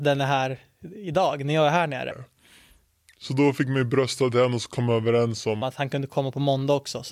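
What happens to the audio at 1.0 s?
At 1.0 s the speech continues without interruption, and there is no dropout, click, distortion or other fault at that moment.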